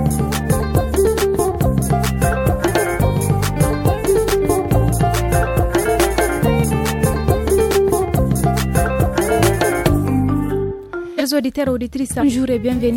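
From 0.12 s to 12.91 s a faint, regular ticking runs under the sound, about every 0.07 s. These are clock slip clicks. The likely cause is two unsynchronised clocks about 300 ppm apart, so a single sample is dropped or repeated at each tick.

Compressed frames are skipped three times: at 2.67 to 2.71 s, 11.17 to 11.22 s, and 12.19 to 12.23 s. The audio jumps ahead by whole frames of 46.4 ms, about 0.3 s, 0.4 s and 0.3 s.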